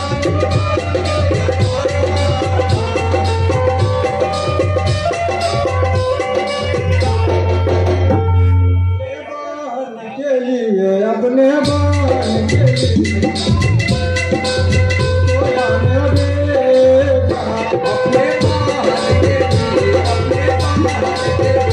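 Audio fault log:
Nothing to log here: the recording has no faults to flag.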